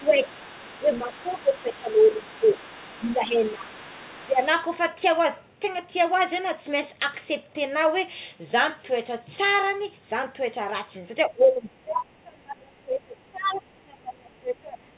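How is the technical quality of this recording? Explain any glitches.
The recording has two recurring faults, both concentrated in the first four and a half seconds, and one of them returns near the end. It is speech carried over a narrowband G.711 mu-law call path, so nothing appears above 4 kHz.

Speech suppressed in double talk occurs at 0.0–0.54 s, 0.79–2.47 s, 2.98–3.72 s, 4.27–4.4 s, and from 11.28 s to the end. The likely cause is an echo canceller that could not tell the talker apart from loudspeaker echo and turned both down. Mostly the level dips by about 10 dB. At 4.27 s it dips by about 15 dB, and in the final stretch by about 25 dB. On a waveform these show as sudden envelope sags. On a spectrogram the bands fade and then return.

The other side's voice leaking through runs from 0.0 to 3.16 s, as a brief scrap at 3.44–3.53 s, and from 3.71 to 4.47 s. This is likely residual far-end audio that the echo canceller failed to remove from the microphone. 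It sits about 25 dB below the main speech, rising to about 20 dB below in the last stretch. On a spectrogram it appears as a faint second set of harmonics overlapping the talker's. In the waveform it shows as low-level activity filling the gaps.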